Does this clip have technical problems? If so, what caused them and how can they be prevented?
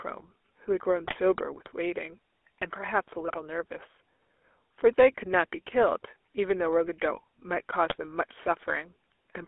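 Yes. Throughout, the GSM full-rate codec gives a buzzy, gravelly roughness, consistent with a 13 kbps pulse-excited vocal-tract model. On a spectrogram, energy stops sharply at 3.5 kHz and there is almost nothing below 300 Hz. Sending audio over a wideband or higher-bitrate codec prevents this.

GSM bit errors at 1.05–1.15 s, 3.28–3.37 s and 7.90–7.96 s break the speech into squawks and gargling. Corrupted filter, pitch and gain values appear as level spikes on the waveform and smeared spectral blocks. A stronger radio link or better error protection prevents them.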